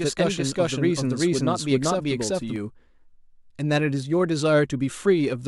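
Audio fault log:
0.00–2.56 s, doubled audio track: a dry, full-band second copy of the speech trails by roughly 400 ms at about equal level, already running at the start and stopping abruptly at 2.56 s; likely a slower second capture path or an edit holding two copies out of step.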